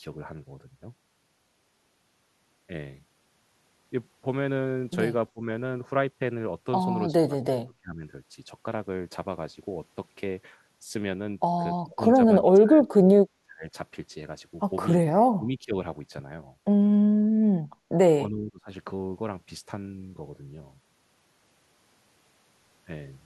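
Speech suppressed in double talk hits this speech clip at 5.33, 7.15–8.03, 11.86–12.18, 12.42–13.22, 13.42–13.73, 15.32–15.75 and 18.3–18.69 s, with the voice dipping by about 20 to 35 dB. Likely an echo canceller, unable to separate the talker from overlapping far-end sound, turned both down.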